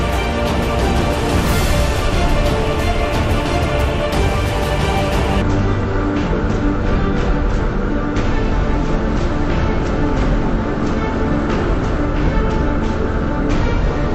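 From 5.42 s to the end of the clip the audio falls into a stereo read as mono fault. The left and right samples, which alternate in the stream, are taken one after another as a single channel, so every stereo frame becomes two consecutive samples. Playback runs at half speed (0.5x) and the pitch drops a full octave, 12 semitones. A fainter mirrored copy of the content also shows up in the upper half of the spectrum.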